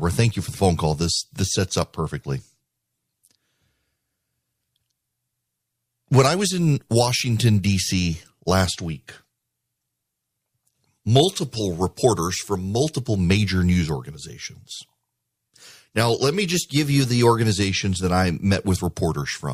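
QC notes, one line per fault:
16.54–17.52 s, drift correction step: just after "now let me", the speech suddenly runs about 5.3% fast and rises in pitch by roughly 90 cents, close to a semitone, with speed and pitch moving together for about a second before snapping back by "that I". This is likely clock-matching software changing the playback rate in one jump to rebalance its buffer, rather than correcting gradually.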